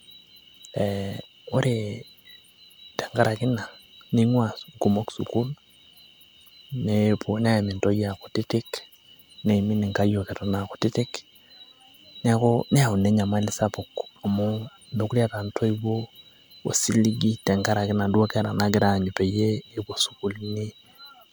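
Throughout, the speech sounds swirly, hollow and smeared, with blurred attacks, likely generation loss from about four MP3 passes at what sounds like 128 kbit/s.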